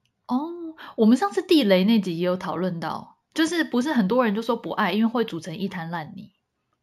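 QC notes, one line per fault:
Throughout: imaging from linear upsampling. The speech fits a 16 kHz source brought up to 48 kHz by joining samples with straight lines, a weak filter, so the top end dulls and a faint mirror copy, roughly 30 dB down, sits at 8 to 16 kHz, adding a metallic shimmer to sibilants.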